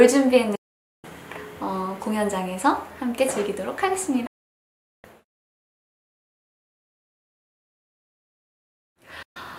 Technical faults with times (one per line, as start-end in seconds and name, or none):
0.55-1.05 digital broadcast dropout
4.26-5.05 digital broadcast dropout
9.22-9.37 digital broadcast dropout